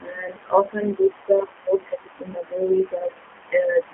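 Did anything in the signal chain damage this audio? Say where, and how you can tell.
Yes. The codec stage damaged this speech: it runs through a G.729 codec for the whole clip, at a rate that sounds like 8 kbit/s. The speech is rebuilt from a filter, pitch and sparse pulses, so it sounds plainly rough and synthetic, band-limited to roughly 250 Hz–3.4 kHz.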